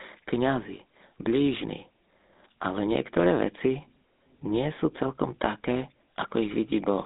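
Throughout the speech, GSM full-rate codec damage is plainly audible. The band runs from about 200 Hz to 3.7 kHz with nothing above 3.8 kHz, and the coarse pulse-train excitation, consistent with a 13 kbps stream, gives the voice a buzzy, gravelly roughness.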